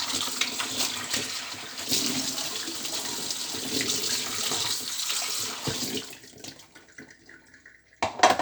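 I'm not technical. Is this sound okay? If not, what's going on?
Yes, it's fine: nothing wrong can be heard here.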